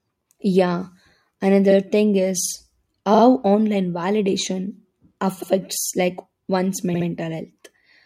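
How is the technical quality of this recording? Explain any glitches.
The recording has two stutters from repeated frames. From 3.14 to 3.22 s, a 42.7 ms slice of speech plays twice more. A run of compressed frames, which fits two frames, was written or sent again and decoded each time, adding 85.3 ms. Right after "like one's", from 6.93 to 7.06 s, a 64.0 ms block likewise repeats twice, consistent with three duplicated frames and lengthening the audio by 128.0 ms.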